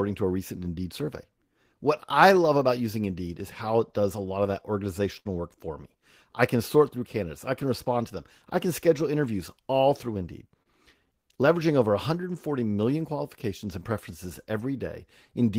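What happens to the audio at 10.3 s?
Right after "can schedule interviews all", from 10.08 to 10.48 s, a jitter buffer speed-up trims about 50 ms by cutting out short pitch-period pieces, so the speech runs at about 111% speed and sounds hurried. Unlike a resampling speed change, the pitch stays put.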